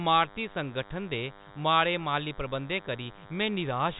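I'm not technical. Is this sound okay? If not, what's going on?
No. A DECT cordless phone buzz runs through the whole clip: a nearby cordless phone's radio pulses leak in as a thin, steady 100 Hz drone beneath the speech.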